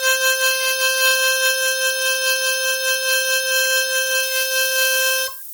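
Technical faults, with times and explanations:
Throughout: Bluetooth LC3 compression. The music has a breathy, grainy edge, with heavy codec damage in the upper spectrum. The likely cause is LC3 coding at a rate that fits roughly 32 kbps with 10 ms frames. Emptied high bands are refilled with noise, and nothing remains above 20.2 kHz.
4.23 to 5.53 s: low bit depth with noise shaping. A steady, thin hiss appears, climbing sharply toward the top of the band and sitting only around 10 dB under the music. This is consistent with requantising to about 6 bits, with the rounding error pushed upward in frequency.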